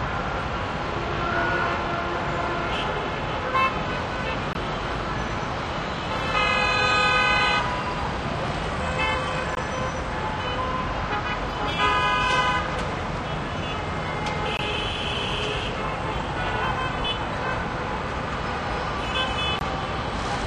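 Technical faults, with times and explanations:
4.53–4.55, 9.55–9.57, 14.57–14.59 and 19.59–19.61 s: gap between chunks. The audio arrives in 5-second chunks, and a 20 ms silence at each join interrupts the sound without losing any of it. These gaps appear as narrow blank vertical stripes on a spectrogram and flat dropouts on the waveform.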